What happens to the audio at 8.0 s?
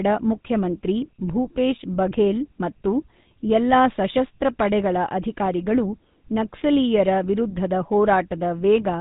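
At 8.0 s the speech has a buzzy, gravelly roughness and a dull, boxed-in tone. This is GSM full-rate codec damage, present throughout the clip rather than just at this moment. The codec rebuilds the voice from a vocal-tract model excited by evenly spaced pulses that keep only a third of the excitation detail. That coarse reconstruction causes the grit. Nothing above 3.8 kHz survives, and the plainly audible damage fits a 13 kbps bitrate.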